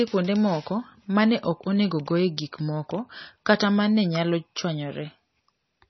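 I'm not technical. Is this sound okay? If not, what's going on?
No. From start to finish the speech has a muffled, watery quality, with a swirling or bubbling that comes and goes. The treble is cut off, so s sounds lose their crispness. This is most likely heavy MP3 compression: starved of data, the encoder dropped the treble and kept switching quieter detail on and off. That flickering swirl is what separates it from simple muffling, which would sound dull but steady.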